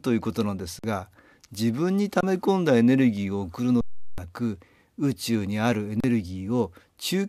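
The speech freezes four times, with little or no click going in: 0.79 to 0.84 s (46 ms), 2.21 to 2.23 s (22 ms), 3.81 to 4.18 s (372 ms, a gap of 16384 samples) and 6.00 to 6.04 s (34 ms). This is an underrun with held sample: the output buffer ran dry, the converter held its last value flat, and roughly as much live audio was lost each time.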